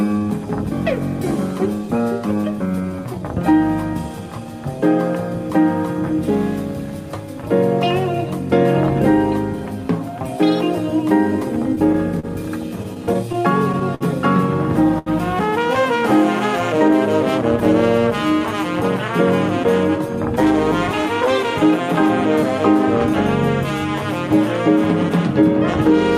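From about 11.75 to 14.03 s there's a run of repeated stalls, basically stutter. Packets kept showing up late, so the jitter buffer drained eleven times, and the receiver padded each gap by carrying the last sound on, around 190 ms in all, longest about 59 ms. Nothing's lost, but it drags and hiccups.

Then at about 14.99 to 15.08 s comes a short stall from a late packet. One packet missed its slot, the buffer ran dry, and the receiver held the previous sound for roughly 76 ms before resuming right where it left off, so you hear a brief smeared hold.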